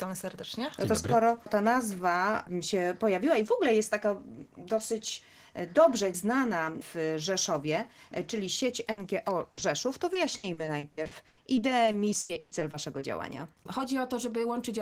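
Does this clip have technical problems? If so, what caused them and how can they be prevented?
Yes. The first fault is a burst of packet loss at 8.91 to 8.99 s and again at 9.51 to 9.59 s. Consecutive packets failed to arrive, and the receiver stretched the last sound for about 60 ms each time, fading it before resuming later with that stretch gone. Forward error correction or a deeper jitter buffer would prevent this.

Straight after the second burst comes a short concealed packet loss from 9.59 to 9.63 s. About 20 ms went missing, and the decoder bridged it by extrapolating the preceding sound, leaving a brief smear before the real audio blends back in. Sending redundant audio in later packets would help prevent this.

From 10.13 to 13.03 s there is repeated packet loss with a robotic sound. Eighteen separate gaps were each patched by continuing the last sound. They total about 740 ms, roughly a quarter of that stretch, and the longest lasts 120 ms, so the sound turns choppy with pieces missing. 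A more stable connection with prioritised traffic would prevent this.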